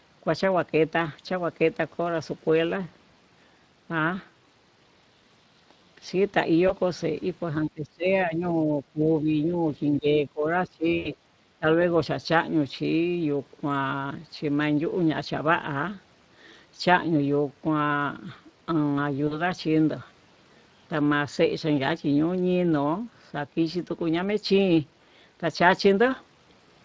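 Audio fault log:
Throughout: Speex codec. The speech is coded at 20.6 kbps, and the damage is plainly audible. A CELP coder this tight has too few bits to rebuild the excitation accurately, so the voice comes out grainy and hoarse, with a noisy edge on vowels. On a spectrogram the harmonics look smeared and rough rather than clean. The top of the band fades out toward 8 kHz, the ceiling set by the call microphone processing, which also trims the deep bass as usual.
6.67 s, 10.97 to 11.09 s, 19.27 to 19.43 s: VoIP packet loss concealed by the speech codec. One, four and two frames went missing, which is 20, 80 and 40 ms. For each gap the decoder repeated its last pitch and filter at falling gain, so each one sounds like a short buzzy smear that sags. The 11 s event is the longest. On a spectrogram each shows as flat, repeated harmonic stripes fading out, with the voice sounding weak for a moment as it recovers.
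7.63 to 8.10 s, 8.26 to 9.05 s, 9.21 to 9.58 s, 9.97 to 10.48 s, 10.67 to 10.87 s, 11.59 to 11.65 s: speech suppressed in double talk. The talker's level repeatedly ducks for between about 70 ms and half a second at a time. The deepest dips are around 20 dB, and the shallowest is only around 5 dB. The likely cause is an echo canceller clamping down while far-end audio played at the same time. On the waveform these show as hollow, pinched-in sections of the envelope, and on the spectrogram as faded vertical bands.
11.21 to 11.29 s: background gated by the echo canceller. For roughly 70 ms the room sound drops by about 7 dB, then comes back once the canceller releases. It is heard as a brief hole in the ambience rather than in the voice. On the waveform it appears as a short notch in the noise floor, and on the spectrogram as a thin, darker column across the low-level background.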